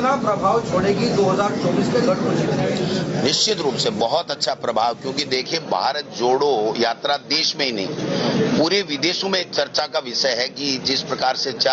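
Input gain is set far too high, with a fast limiter likely clamping down on each loud sound, so the level pumps throughout by roughly 25 dB, squashing loud and soft parts closer in level. The audio stops at 8 kHz, as the call path sets.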